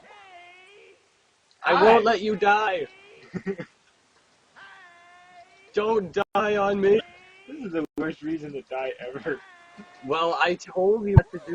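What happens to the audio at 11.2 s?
Right around there, from 11.14 to 11.19 s, there is damaged data in the compressed stream. The decoder hits corrupted frames, loses sync and skips ahead to the next valid frame header, so the audio breaks into a brief glitch.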